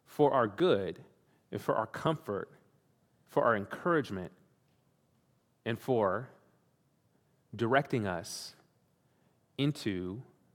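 At 0.60 s, just after "for our", the speech jumps forward. About 20 ms of audio is missing. At 2.07 s, after "and for our", it happens again, this time losing around 10 ms. Neither gap leaves any silence. The two sides of the cut are simply butted together. Both are heard as a jump in the flow. This is likely a dropped buffer (overrun), where samples were overwritten before the program read them.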